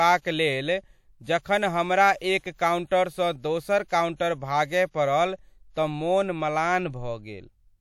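A transform codec has spread its quantisation noise across whole blocks, so noise meant for sharp attacks leaks into the quiet just before them. This pre-echo appears three times in the speech: from 2.17 to 2.21 s (42 ms), from 2.39 to 2.44 s (53 ms), and from 2.87 to 2.91 s (40 ms). Each time a brief hiss runs ahead of the attack, which lands softened and smeared rather than crisp.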